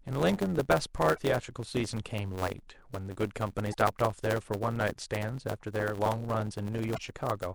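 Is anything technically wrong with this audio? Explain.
Yes. A block size mismatch (truncated) runs throughout: each block is written longer than the next stage reads, which fits 512-sample blocks, and the tail of each is discarded. This produces a steady buzz near 92 Hz, and the speech plays about 1.07 times fast at roughly normal pitch.

Damaged data in a compressed stream appears at 1.14–1.18 s, 3.70–3.74 s and 6.94–6.98 s. Corrupted bytes make the decoder misread frames, lose sync and hunt for the next frame header, giving a brief disturbance of about 44 ms each time.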